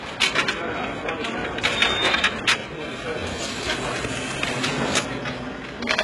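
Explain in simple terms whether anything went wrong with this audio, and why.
Yes, heavy HE-AAC compression likely runs through the whole clip: the treble sounds bright but fake and gritty, rebuilt from lower sounds, rather than simply dulled, and nothing reaches above 11.5 kHz.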